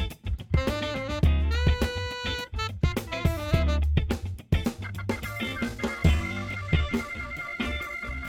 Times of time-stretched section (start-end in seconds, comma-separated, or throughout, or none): 5.29-8.28